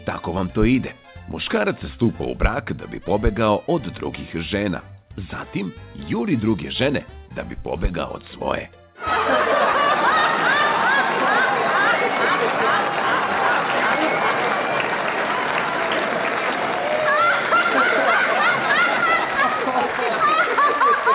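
No faults found; the audio has the narrow band of a call path, with nothing above 4 kHz, which fits a G.711 codec.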